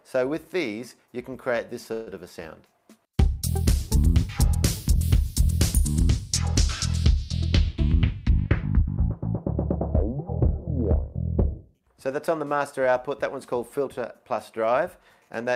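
At 1.93 s there is a call audio freeze lasting until 2.09 s. The sound stops advancing, and the last fragment is drawn out as a fading continuation that fills about 134 ms, with no dead silence. The audio then resumes at 2.09 s exactly where it stopped, with nothing missing, so everything afterwards runs 134 ms later than before. The likely cause is packets delayed in transit, leaving the receiver's jitter buffer empty and forcing it to extend the last sound until they arrived.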